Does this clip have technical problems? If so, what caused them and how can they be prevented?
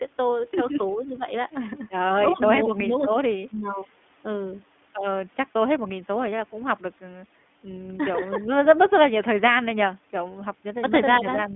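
Yes. iLBC codec damage runs throughout: the speech is squeezed into a narrow telephone band of roughly 200 Hz to 3.5 kHz, and each 20 ms frame is coded independently, leaving a plainly audible rough, synthetic edge that fits iLBC's 15.2 kbps mode. Using a wideband codec such as Opus would prevent it.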